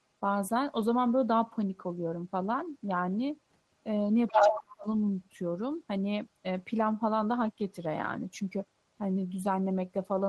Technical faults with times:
4.28-4.75 other side's voice leaking through
4.32-4.86 speech suppressed in double talk

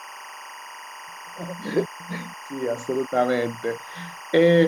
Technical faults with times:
0.00-4.68 timecode bleed

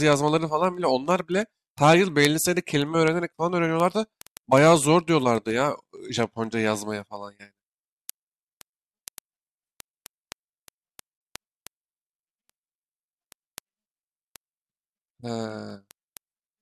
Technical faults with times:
0.13-16.58 word clock ticks

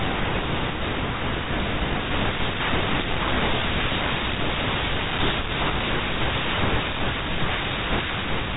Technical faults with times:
none

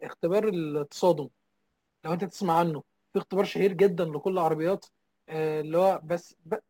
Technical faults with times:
0.00-6.70 sample clock jitter

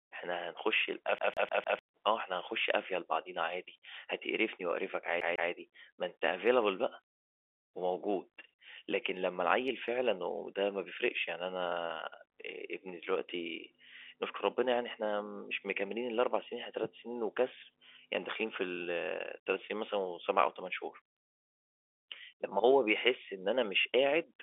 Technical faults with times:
1.18-1.79 CD stuck on one turn
5.20-5.51 CD stuck on one turn
23.83-23.85 packet loss with pitch repetition

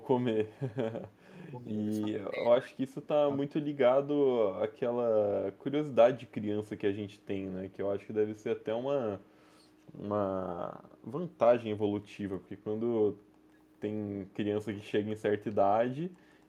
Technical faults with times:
1.12-1.18 echo leak
2.01-4.04 speech suppressed in double talk
7.19-7.26 echo leak
9.30-9.63 echo leak
16.23-16.40 echo leak

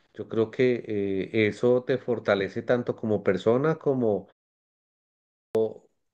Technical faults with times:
4.92-5.55 clipped start after a pause

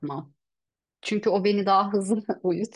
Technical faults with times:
none

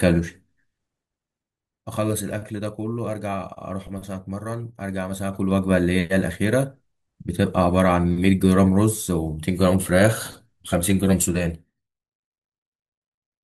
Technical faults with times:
5.02-5.76 zipper noise
11.15-12.07 zipper noise

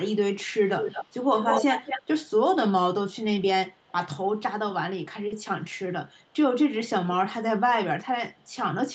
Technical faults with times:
0.11-2.25 echo leak
3.12-3.92 echo leak
5.02-6.36 echo leak
5.27-5.32 short stall from a late packet
8.34-8.54 echo leak

